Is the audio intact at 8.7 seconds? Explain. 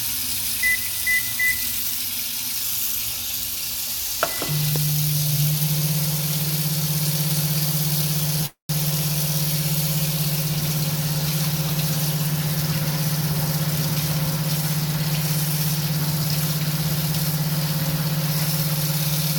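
No, a call audio freeze runs from 8.46 to 8.71 s, likely from delayed packets draining the jitter buffer. The last sound stretches into a fading buzz or hiss and then about 120 ms of silence, before resuming roughly 0.23 s late with nothing lost.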